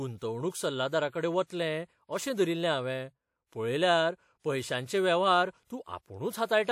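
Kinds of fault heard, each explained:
Pre-echo: a transform codec spreads quantisation noise across a block, so a brief hiss arrives just before sharp speech onsets and softens them. Here it lasts 31 to 50 ms, at 1.47, 4.39 and 5.65 s. Unlike reverb, the smear comes before the attack, not after it.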